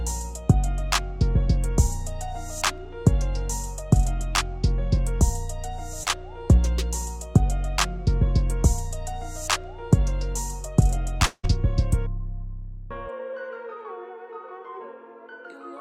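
A brief smear passes through the sound from 6.03 to 6.08 s. This is short concealed packet loss: about 20 ms of audio arrived too late, and the receiver bridged the gap by stretching the preceding sound before blending back into the real signal.

From 11.26 to 11.45 s the sound turns into a fading buzz or hiss that thins to about 30 ms of silence before the audio resumes with roughly 180 ms gone. The likely cause is a long network dropout, with the receiver extrapolating the last sound until it ran out.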